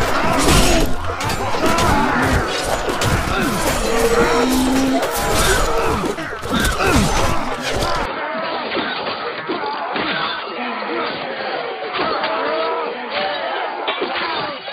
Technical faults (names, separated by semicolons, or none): input switched to a poorer device